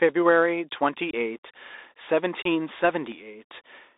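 From start to finish the speech sounds thin and boxed in, held between roughly 300 Hz and 3.7 kHz, with scratchy s sounds and a grainy hiss beneath it. This is the Bluetooth CVSD headset codec, whose one-bit up-or-down steps, consistent with a 64 kbps link, cannot track fast detail, so the damage is plainly audible.

At 1.11 s the speech drops out for about 22.5 ms, and again at 2.42 s for about 30 ms, each a brief hole with abrupt edges. These are unconcealed Bluetooth headset packet losses: a few voice packets never arrived and were replaced by silence or an idle pattern rather than patched over.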